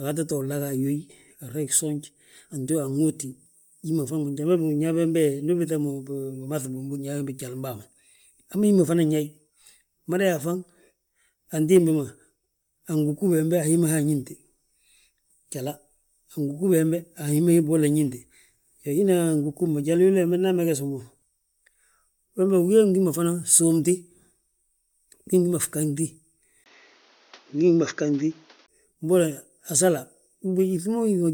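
From the start of the speech to its end, the upper frequencies have a breathy, grainy shimmer, with sibilants and the top of the voice sounding smeared and noisy instead of crisp. The damage is plainly audible throughout. This is likely Bluetooth LC3 compression: the LE Audio transform codec discards much of the high spectrum and fills the gaps with shaped noise. The texture points to a bitrate of around 48 kbps with 10 ms frames.

At 26.64 s the audio drops out for a brief 20 ms gap. It then returns duller and boxier, with nothing above 6.8 kHz, a level shift of roughly 5 dB, and a faint new background hiss sitting far below the speech. At 28.68 s the fuller sound returns. This fits the input being switched to a poorer device, likely another microphone or a headset's call profile, with a narrower band and its own tone, gain and noise floor.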